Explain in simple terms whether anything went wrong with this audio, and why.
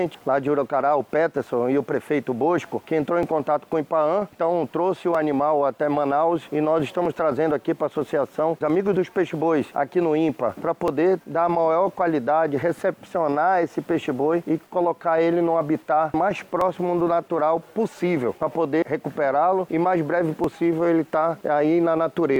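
Something did go wrong: a click repeats about every 1.91 seconds, from 1.31 s to 22.36 s, about ten in all. That's clock drift buffer slips, likely two devices whose clocks disagree slightly, so a tiny chunk of sound gets dropped or doubled each time.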